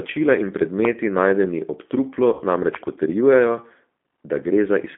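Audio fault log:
throughout, G.729 codec: The whole clip has that narrow telephone sound, confined to roughly 200 Hz to 3.5 kHz with nothing up top, and the coding damage is plainly audible. The speech has a rough, slightly synthetic edge because it's rebuilt from a vocal tract filter, a pitch predictor and a handful of pulses per frame rather than the real waveform. That points to G.729A at around 8 kbit/s.
0.85 to 0.87 s and 2.75 to 2.85 s, loud pop: The first is a single sharp pop. The second is a pair of pops in quick succession. Each hits somewhere around 15 dB above the speech, and the speech carries on underneath. That's the signature of a sudden voltage step or pulse landing in the signal, likely from a plug, a switch, static or a driver glitch. The circuitry after it shapes the pulse into a snap or thump.
2.33 to 2.43 s, VoIP packet loss concealed by the speech codec: About 60 ms of audio went missing, which fits two dropped packets. 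The decoder covered the gap by replaying its last pitch and filter at falling gain, so you hear the sound smear into a buzzy tone or coloured noise that fades, instead of a clean dropout. Because each frame leans on the previous one, the speech stays weak or distorted for a moment after the real packets resume.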